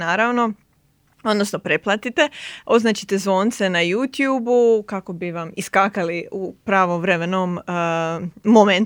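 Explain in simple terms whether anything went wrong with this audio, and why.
Nothing went wrong with this audio: the speech carries no audible technical fault, so there is nothing to explain.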